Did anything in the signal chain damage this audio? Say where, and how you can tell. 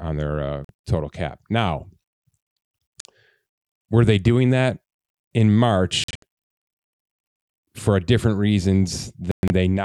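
Yes. Silent holes cut the speech at 0.65 s, after "on their uh", and at 3.0 s, each about 46 ms. Clustered holes follow at 6.04 to 6.23 s, after "they doing that in", and 9.31 to 9.50 s. Speech resumes as if it played on. This is likely a Bluetooth dropout in wireless playback, where late packets were discarded.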